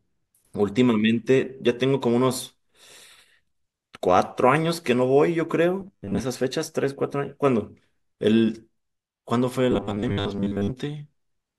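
At 5.81 s the speech turns to robotic sound from repeated short buffers for 0.4 s, and again from 9.72 to 10.72 s. Each stretch is a rigid metallic buzz at 100 Hz that only loosely tracks the speech, likely from new audio arriving too seldom so a 10 ms chunk is replayed while most of the real audio is skipped. A spectrogram shows flat, evenly spaced harmonics at 100 Hz multiples; the waveform shows identical repeating 10 ms cycles.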